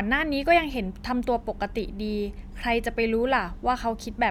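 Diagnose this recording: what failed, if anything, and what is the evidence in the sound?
Nothing in this speech recording points to a failure at any stage of the chain. No audible event in the sound marks a break anywhere between capture and playback.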